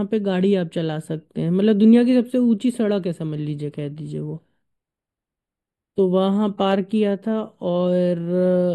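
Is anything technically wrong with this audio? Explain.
Yes. Throughout the speech there is channel delay (comb filtering): one channel lags by a few samples, and summing cancels fixed, evenly spaced notches from around 7 kHz up, dulling the top. Unlike a phaser, the notches never sweep.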